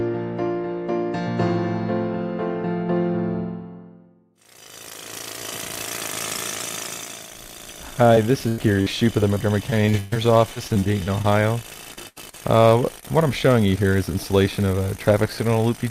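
At 8.15 s there is a short concealed packet loss: about 20 ms of audio never arrived and the decoder extended the preceding sound to cover it, leaving a brief smear before the signal resumes. A burst of packet loss follows at 8.48 to 8.60 s, where roughly 100 ms went missing. The receiver stretched the last sound across the hole and faded it down, so what is heard is a held, decaying fill, and the audio picks up later with that stretch lost. At 8.82 s a second short concealed loss of about 40 ms produces another momentary wobble.

Repeated packet loss (robotic sound) then sets in across three spans. From 9.34 to 10.17 s there are six gaps totalling about 240 ms, the longest 124 ms, so 28% of that stretch is synthesized fill. From 10.53 to 11.26 s, seven shorter gaps of no more than 30 ms remove about 140 ms (20%). From 11.94 to 12.41 s, four gaps, the longest 79 ms, remove about 140 ms (32%). 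Because each patched hole is followed closely by the next, these passages sound choppy, with fragments missing.

A final short concealed packet loss at 13.01 s covers about 20 ms and is heard as a small smear.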